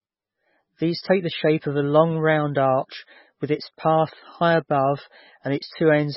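Speech runs through the whole clip with heavy MP3 compression damage from start to finish. Nothing is heard above about 5.6 kHz, so the top end sounds dull and boxed in. Quiet detail comes and goes from moment to moment, giving a watery, swirling texture. S sounds turn metallic and chirpy. The likely cause is an MP3 encoder starved of bits, which fits a rate near 16 kbps. It chops off the treble and drops the weaker parts of the sound.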